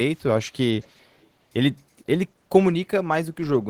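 From 0.15 to 0.22 s, and again from 0.81 to 1.25 s, a faint echo leak trails the speech by about 400 ms. It is likely a far-end loudspeaker echo that the echo canceller left behind. On a spectrogram it appears as a weak, delayed copy of the speech harmonics, roughly 35 to 40 dB below the speech.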